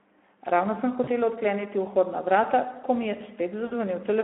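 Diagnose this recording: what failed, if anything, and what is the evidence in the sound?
At the codec stage, low-rate Speex coding, consistent with about 11 kbps, leaves the speech hoarse and noisy throughout, confined to 250 Hz to 3.5 kHz.

On the network, VoIP packet loss concealed by the speech codec: at 1.03–1.10 s and 3.65–3.74 s, the decoder extrapolates its last frame, producing buzzy or noise-like, fading gaps.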